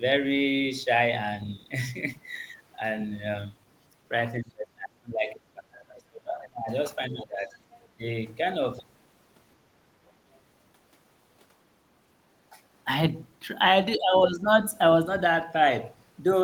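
From 4.4 to 6.71 s the speech sinks sharply, dropping by roughly 30 dB at its deepest, for about two seconds in all. This is speech suppressed in double talk. Both ends were likely talking at once. The echo canceller could not tell the local talker from loudspeaker echo, so it turned the whole signal down.

A shallower dip of about 15 dB follows from 7.07 to 7.51 s. It is the same suppression, likely caused by overlapping talk again.

From 7.55 to 7.59 s the other side's voice is leaking through. It is a brief, faint scrap, roughly 30 dB below the speech. The likely cause is echo from the loudspeaker that the canceller did not fully remove from the microphone.

From 7.97 to 8.02 s there is a very short suppression of about 15 dB. The level ducks briefly, likely because the canceller reacted to far-end talk.

From 10.35 to 10.4 s another tiny trace of the other side's voice leaks through. 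It sits even lower, roughly 40 dB under the speech. This residual echo likely slipped past the canceller as well.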